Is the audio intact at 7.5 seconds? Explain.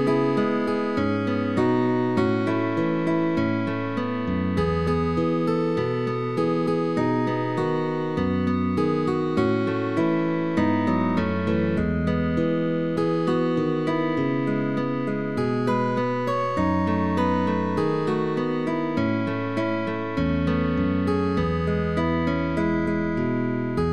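Yes, at 7.5 seconds the audio plays through cleanly, with no dropout, click, distortion or other fault at that moment.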